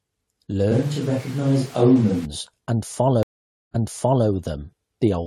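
A speech clip with two faults. From 0.72 to 2.25 s the voice turns roomy and hollow with thinner bass, though its level barely changes and background noise sits roughly 25 dB under it, which points to a likely switch to a distant microphone in place of the close one. At 3.23 s the audio drops out for about 0.51 s, then resumes about 0.53 s earlier than where it stopped, running until 4.28 s. This is a stream reconnect: the connection broke, a fresh decoder started mid-stream, and the server resent a stretch already played.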